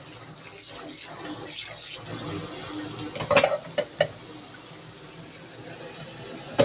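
From start to finish, a noise suppressor applied to music or sounds is at work. A speech-oriented suppressor treats the steadier, sustained parts of these sounds as background noise and pulls them down, while sharp onsets pass largely intact. The level of held portions and decays swings by roughly 5 dB, giving a pumping, fluttery quality as tails sink away. The audio is also band-limited to 4 kHz, which points to narrowband telephone coding such as G.711.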